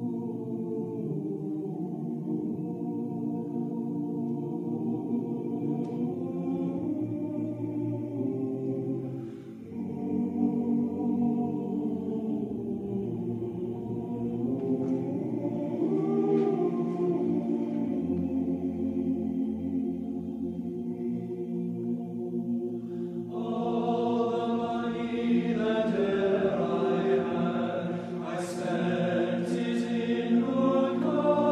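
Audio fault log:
No fault can be heard anywhere in the clip. Nothing in the sound calls for a log entry.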